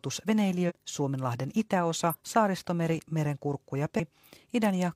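At 0.65, 2.09 and 3.95 s the speech jumps forward as compressed frames are skipped, losing about 0.2, 0.1 and 0.3 s of audio. This fits whole 46.4 ms frames dropped by the decoder.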